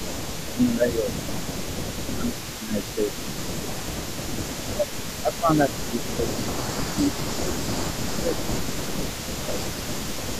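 Throughout the clip there is an echo leak: a faint delayed copy of the speech trails it by 292 ms, around 20 dB below the main signal. The likely cause is a far-end loudspeaker whose echo canceller let part of the microphone pickup return down the line.

Speech suppressed in double talk appears at 0.41–1.17, 2.00–2.77, 2.95–3.83, 4.45–5.05, 5.21–7.74, 8.02–9.24 and 9.42–10.21 s. The speech dips by roughly 15 to 20 dB, most heavily, about 20 dB, at 4.45–5.05, 5.21–7.74 and 8.02–9.24 s. This is likely an echo canceller that couldn't separate talker from echo during overlap and turned both down.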